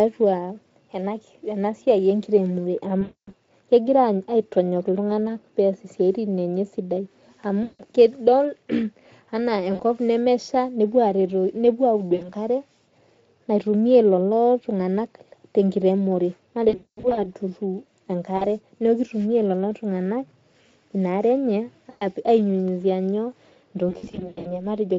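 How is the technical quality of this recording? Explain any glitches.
Quality is marred by repeated VoIP packet loss concealed by the speech codec, at 3.01–3.32, 7.63–7.84, 9.73–9.83, 12.15–12.30, 16.69–17.27, 18.37–18.47, 21.89–22.04 and 23.89–24.64 s. The light Speex coding underneath shows only faint roughness. Packets went missing, so the decoder extended its last pitch and filter while lowering the gain. The speech stretches into a fading buzz, and it stays weak briefly after packets resume.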